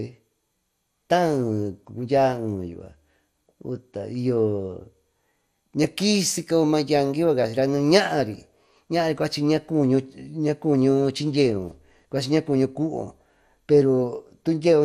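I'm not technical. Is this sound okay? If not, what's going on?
No. From start to finish the speech sounds dull and gurgly, with a grainy roughness, most likely from MP2 compression squeezing it too hard. Unlike plain muffling, the treble comes and goes in patches, and nothing is left above about 15.1 kHz.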